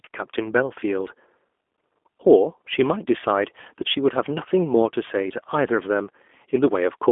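From start to finish the speech carries G.729 codec damage, plainly audible as a rough, slightly synthetic texture that fits an 8 kbit/s coder rebuilding each frame from a vocal tract filter, a pitch predictor and a few pulses. The line band runs from about 250 Hz to 3.5 kHz, giving a thin telephone tone. On a spectrogram, energy stops sharply near 3.6 kHz, with nothing above, and harmonics look smeared and slightly blotchy.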